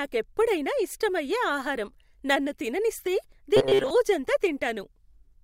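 Audio reaching the playback stage too slowly, with the software likely covering each gap by looping the last few milliseconds it held, produces robotic sound from repeated short buffers in this speech clip from 3.57 to 3.90 s, just after "ఇష్టమయ్యే ఆహారం నన్ను తిననిస్తే". Around two thirds or more of that stretch is recycled material rather than new signal, and the repeats impose a fixed 133 Hz buzz, which fits a loop of roughly 7.5 ms. The voice becomes a flat, metallic drone that only loosely tracks the speech.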